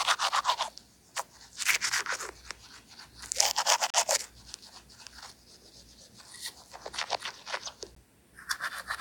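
Two gaps between stream segments occur where segment time stamps fail to line up, about 4 s apart, and the player inserts silence. At 3.90 to 3.94 s a hard-edged 36 ms hole cuts the sound, and at 7.95 s a shorter 15 ms dropout follows. No audio is lost.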